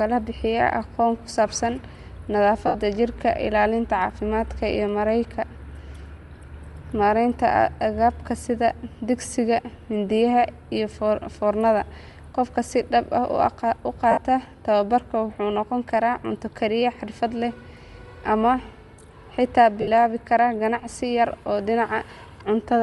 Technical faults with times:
0.00-22.83 Bluetooth LC3 compression
2.67-2.75 lost LE Audio frames
14.11-14.18 lost LE Audio frames
19.81-19.88 lost LE Audio frames

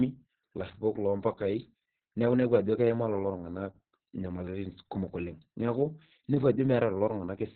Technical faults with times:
0.00-7.56 Opus voice compression

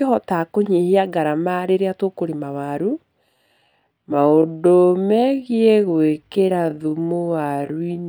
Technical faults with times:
3.32-8.09 time-stretched section

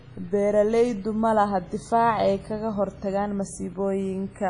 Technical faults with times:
0.00-4.49 WMA compression

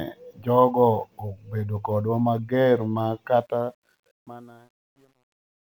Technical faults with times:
3.39-5.77 truncation distortion on a fade

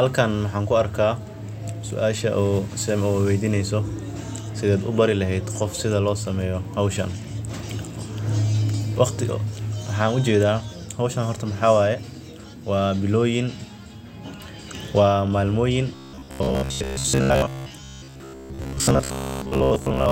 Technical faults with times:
15.95-20.12 robotic sound from repeated short buffers

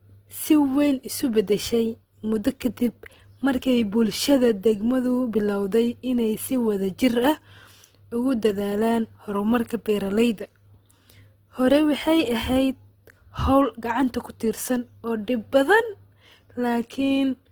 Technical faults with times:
0.00-17.52 Opus compression

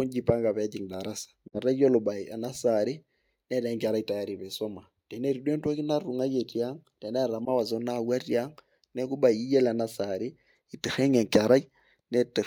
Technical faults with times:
1.48-1.59 Bluetooth dropout
7.45-7.48 Bluetooth dropout

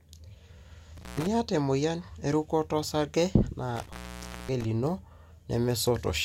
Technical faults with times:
0.96-1.27 intermittent contact
3.76-4.64 intermittent contact

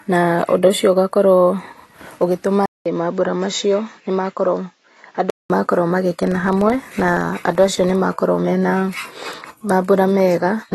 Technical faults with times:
0.00-10.74 AAC compression
2.66-5.50 input switched to a poorer device
6.23-7.94 filter restarted on every block

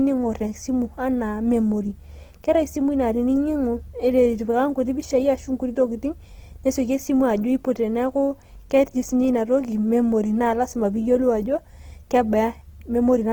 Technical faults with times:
0.00-13.33 Opus compression

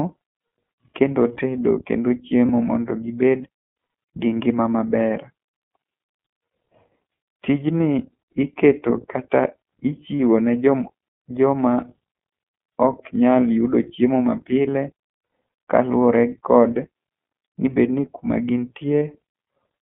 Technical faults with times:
0.00-19.82 iLBC codec
2.46-2.49 lost iLBC frames
10.17-10.20 lost iLBC frames
19.00 lost iLBC frames

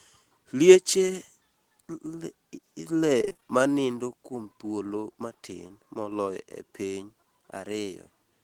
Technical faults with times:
3.21-3.43 repeated packet loss (robotic sound)
5.67-5.71 short concealed packet loss

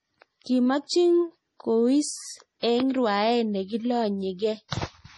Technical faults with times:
0.00-5.17 MP3 compression

